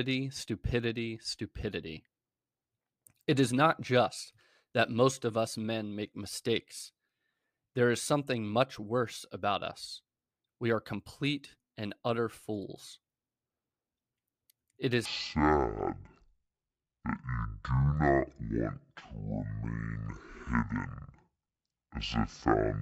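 From 15.05 s, just before "stone and support the", the speech turns deep and dragging, about ten semitones lower: a section at the wrong speed, likely played at half speed.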